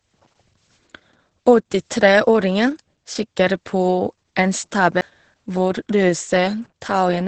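From the start, the whole clip carries Opus voice compression in its SILK speech mode. Nothing is heard above about 8.6 kHz. The excitation is coded coarsely. The damage is heavy: muffled, hoarse and slightly robotic. That fits a bitrate near 10 kbps.

At 5.01 s there is a CD skip. The laser jumped to another turn of the disc's spiral. The player muted very briefly and resumed from a different place. It is heard as a tick and an abrupt jump.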